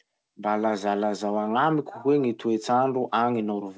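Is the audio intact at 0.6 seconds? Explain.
Yes, the speech is intact at 0.6 seconds, with no fault there; it passes cleanly through the WebRTC call path, whose G.722 coding leaves nothing above 8 kHz.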